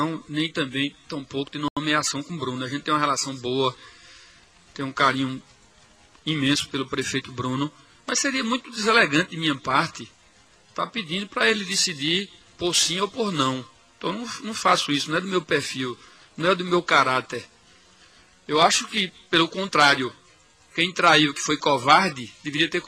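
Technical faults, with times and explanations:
1.68–1.77 s, Bluetooth stall: the sound drops to silence for 86 ms, then resumes as abruptly as it stopped, with no fade on either edge. This is likely a wireless link hiccup: radio interference delays audio packets, the headphones use up their small reserve of buffered audio, and playback simply halts until the retransmitted packets arrive. The hard, clean gap is the buffer running empty.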